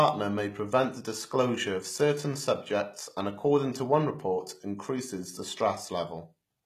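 From start to finish the speech carries plainly audible HE-AAC compression damage. The treble sounds rebuilt rather than recorded: s sounds come out gritty and lispy, with a metallic sheen up top. That's likely from a low-rate HE-AAC encode, which fits something around 20 kbps.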